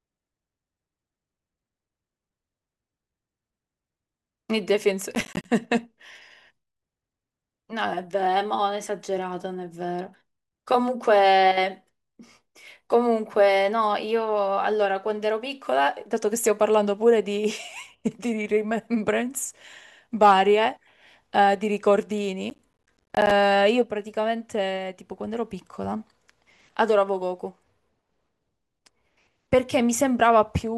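Around 5.15 to 5.45 s the speech breaks into a short burst of processor overload crackle, and it comes back harder from 22.5 to 23.31 s. The machine couldn't finish its tiny audio buffers in time, so chunks of roughly 10 ms kept dropping out as silence. With about ten misses in the first burst and around thirty in the second, those hard-edged gaps pile up into a gritty tearing that stops once the load eases.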